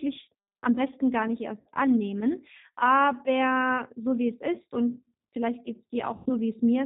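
The speech in this clip has passed through the G.729 codec at 8 kbit/s, and the damage is plainly audible. The coder rebuilds each 10 ms frame from a vocal tract filter, a pitch predictor and a few pulses, discarding everything above 4 kHz. The result is narrowband, slightly rough and synthetic throughout. VoIP packet loss concealed by the speech codec then interrupts it twice. Just after "am besten gar nicht", around 60 ms of audio went missing, which fits three 20 ms packets. Between 1.60 and 1.69 s the decoder stretches its last pitch and filter state into a fading buzzy tone or coloured noise. A larger gap of about 100 ms, consistent with five packets, is concealed from 6.16 to 6.30 s. There the extrapolated sound decays further, and the voice stays weak or distorted briefly after real frames resume.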